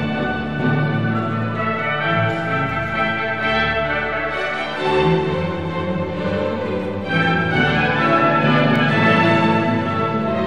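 At about 8.76 s there's a tiny skip where a sliver of sound just goes missing: an overlap between stream segments. Two neighbouring chunks of the stream claimed the same stretch of time, so the player trimmed the overlap on the assumption it was duplicated. It wasn't, so roughly 17 ms of real audio got thrown away and the waveform jumps across the gap. The timing fits a stream cut into 2-second segments.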